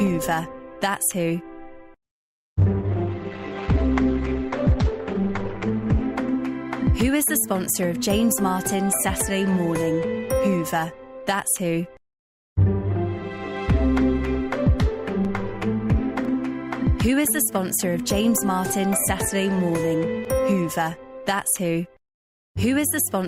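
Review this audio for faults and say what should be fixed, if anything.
From 2.03 to 6.03 s an adaptive stream at a lower bitrate cuts everything above 8.7 kHz and adds codec artefacts, which fits a rendition at about 12 kbit/s. Unlike a dropout, it switches abruptly with no gap. Buffer more ahead or cap downward bitrate switching so brief connection slowdowns don't force the lowest rendition.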